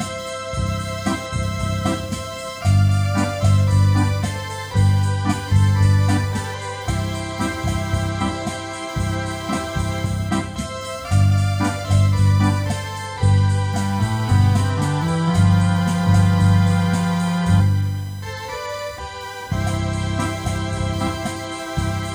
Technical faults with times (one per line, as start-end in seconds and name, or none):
0.00-22.14 computer activity noise